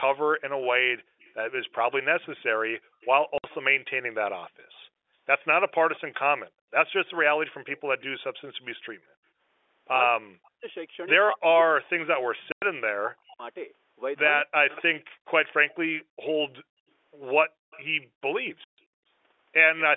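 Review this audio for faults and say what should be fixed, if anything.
Echo leak: a faint delayed copy of the speech trails it by 235 ms from 0.64 to 6.01 s, 7.66 to 8.24 s and 14.75 to 19.82 s. It sits roughly 25 dB below the speech, closer to 20 dB below in the last stretch. The likely cause is a far-end loudspeaker whose echo canceller lets residual pickup through. Prevention: improve echo canceller convergence and residual echo suppression, or use a headset at that end.

Background gated by the echo canceller: the room sound drops abruptly at 1.10 to 1.16 s (about 40 dB), 2.80 to 3.01 s (about 29 dB) and within 16.68 to 19.02 s (about 40 dB, about 0.7 s in total), then returns. The canceller is clamping the microphone while the loudspeaker plays. Prevention: use comfort noise and gentler suppression.

Packet loss filled with silence: hard-edged holes appear at 3.38 to 3.44 s (60 ms), 12.52 to 12.62 s (100 ms) and 18.64 to 18.78 s (140 ms). 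All are multiples of 20 ms, which fits 20 ms packets replaced by silence. Prevention: enable packet loss concealment and a jitter buffer, and fix the network loss.

Speech suppressed in double talk: from 10.16 to 14.97 s, the talker's voice is pulled down in pieces, at worst by roughly 40 dB, for about 2 s in total. The likely cause is the echo canceller failing to separate near-end speech from loudspeaker echo while both sides talk. Prevention: tune double-talk detection so near-end speech is not attenuated.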